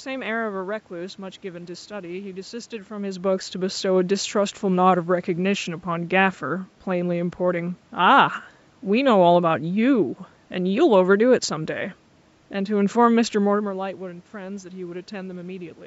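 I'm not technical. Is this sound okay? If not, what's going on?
Yes, nothing is wrong with this recording. The voice gets quieter or louder around 3 seconds and again near 13.5 seconds, as when someone shifts closer to or away from the microphone, and there is some background noise from the room.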